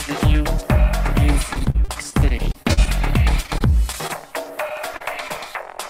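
From 1.53 to 2.88 s the audio breaks up with repeated packet loss, giving that robotic sound. Sixteen separate holes land in that stretch, the longest about 41 ms, and roughly a quarter of the span ends up as patched-in material. Each time, the receiver stretches the last bit of sound to cover the hole, then loses more before it recovers. You hear choppy stuttering with chunks missing.

It happens again, more mildly, from 3.43 to 4.11 s. This time there are five holes of up to about 21 ms, and around 13 percent of that span is filled in. It's still audibly chopped, but lighter than the first burst.

Then come two isolated short concealed packet losses. The first, from 4.96 to 5.02 s, covers about 40 ms of missing audio. The second, from 5.28 to 5.32 s, covers about 20 ms. In both, the decoder extends the preceding sound across the hole and blends back into the real signal, so each comes across as a quick smear or wobble rather than a clean gap.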